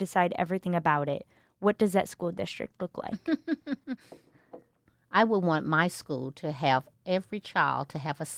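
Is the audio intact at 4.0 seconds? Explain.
No. At 4.0 s the speech is in a call bitrate drop, 2.03 to 4.07 s, where the encoder falls from 32 to 18 kbps and codes the sound coarsely, leaving it rough.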